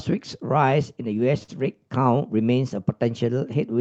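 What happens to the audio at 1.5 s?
A short stall from a late packet runs from about 1.43 to 1.50 s. A speech packet arrived behind schedule, the jitter buffer drained, and the receiver held the last sound for roughly 48 ms until the data turned up, then carried on from the same point. Nothing is lost, but a sound lingers unnaturally with a faint buzzy or slightly dipped quality, and everything after is pushed about 48 ms later.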